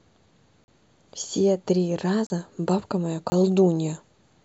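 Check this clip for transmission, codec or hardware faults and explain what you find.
Three short dropouts interrupt this speech clip, all of the same kind. Block of digital silence at 0.64 to 0.68 s (40 ms), 2.27 to 2.30 s (34 ms) and 3.30 to 3.32 s (20 ms): each time, a run of samples has been replaced by zeros, as when the output buffer isn't filled before it's due. The audio drops to dead silence and returns with no fade, so each gap is a brief hole in the speech.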